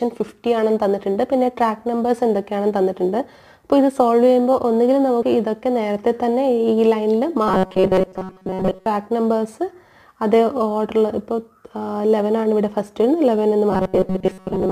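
From 7.48 to 8.86 s, and again from 13.70 s to the end, the sound turns into a rigid metallic buzz pinned at 188 Hz. This is robotic sound from repeated short buffers, likely caused by audio arriving too slowly, so most of it is replaced by loops of a roughly 5.3 ms slice. Unlike a plain stutter or dropout, the buzz pitch stays fixed while the underlying sound's contour still roughly comes through.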